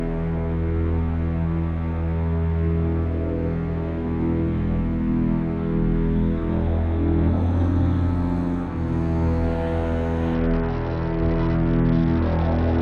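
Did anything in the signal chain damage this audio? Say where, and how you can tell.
Yes. At the codec stage, a Bluetooth SBC bit pool drop begins at 10.34 s and lasts to the end of the clip at 12.81 s. The link evidently congested and the sender cut its bit budget, which fits a fall from a bit pool of 31 to 8, about 66 kbps. With so few bits, the upper sub-bands get little or nothing and the rest are coarsely quantised, so the treble dulls and a gritty noise rises, with no recovery before the clip ends.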